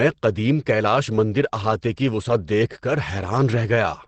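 From start to end, the speech is heavily degraded and sounds muffled and hoarse. Nothing is heard above 8.6 kHz, so the top of the spectrum is simply gone. The likely cause is Opus compression in its speech-oriented SILK mode, which models the voice rather than the full waveform. The heavy damage fits a low rate of around 12 kbps, where the encoder discards fine detail and narrows the band to save bits.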